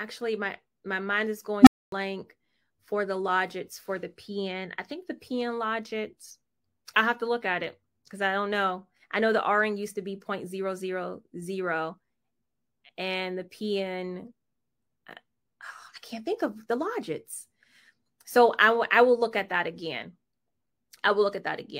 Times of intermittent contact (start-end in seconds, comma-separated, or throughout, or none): none